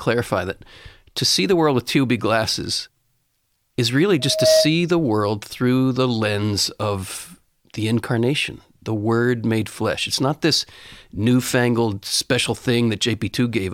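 A microphone is picking up the loudspeaker it drives, and around 632 Hz the loop gain climbs past unity, so from 4.19 to 4.76 s, just after "is really", loudspeaker feedback squeal takes over. That single 632 Hz tone swells over roughly a third of a second into a steady squeal sitting a few decibels above the speech, then drops away before "the world through the".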